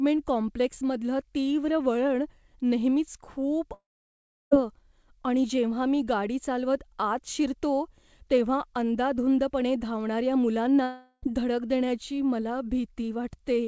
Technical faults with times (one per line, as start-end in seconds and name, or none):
3.74-4.53 long network dropout
10.83-11.24 long network dropout